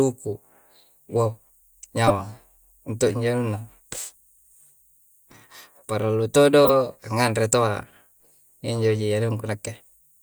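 Corrupt frames decoded at 2.07–2.11 s and 6.64–6.70 s: the decoder played damaged compressed data, spraying misplaced energy as loud bursts, the second about 5 dB stronger than the first.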